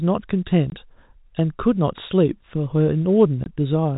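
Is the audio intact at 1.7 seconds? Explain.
Yes, the speech at 1.7 seconds is intact, carried through G.711 telephone coding with its usual 4 kHz upper limit and no fault at that moment.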